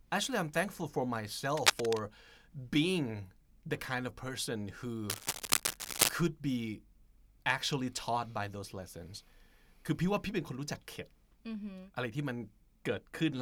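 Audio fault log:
1.57–2.05 s and 5.10–6.11 s, cable scratch noise: dense, uneven scratching and rustling lies over the speech, first just after "I'm thankful for", a little louder than the voice, then after "the kind of person" until "could be", at about the voice's level. The likely cause is a worn cable, connector or control being moved, so its contact resistance jumps around rapidly and injects ragged bursts of noise for as long as it shifts.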